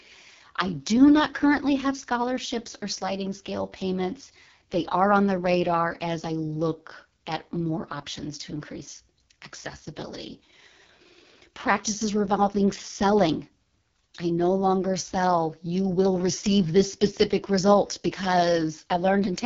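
From start to finish the speech carries the signature of the AMR wideband (HD Voice) codec at heavy damage. The model tracks the vocal tract and drives it with sparse pulses, which here leaves voiced sound rough and raspy, with a buzzy, grainy edge. The roughness fits the lowest 6.6 kbit/s mode. Nothing is present above 7.1 kHz, and the top band sounds like shaped noise rather than real detail.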